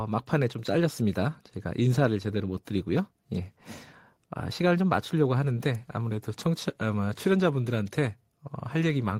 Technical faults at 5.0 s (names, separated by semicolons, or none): none